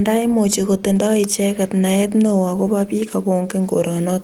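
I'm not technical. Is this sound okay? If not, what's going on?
Yes, no fault found; the speech is carried by Opus voice compression at full bandwidth.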